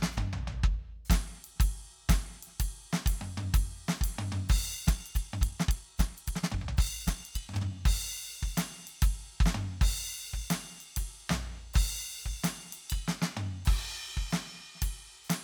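A time-stretched section runs from 4.73 s to 7.71 s in this music clip, where the pace suddenly jumps to about 1.77 times normal speed while the pitch stays where it was. Across that stretch the audio turns rushed before normal pace returns. The likely cause is software squeezing that portion to fit a shorter length, dropping short slices of the waveform so the pitch holds steady as the material is compressed in time.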